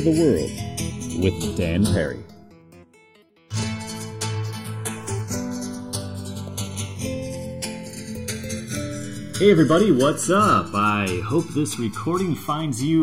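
The two channels were captured on devices running from separate clocks, with a mismatch of around a hundred parts per million, so the timing offset between them keeps creeping for the whole clip, reaching about a millisecond by the end. That is the fault of channels drifting apart. Heard in mono, the summed channels form comb-filter notches that glide slowly across the spectrum, giving the sound a gradual, sweeping flanging character throughout.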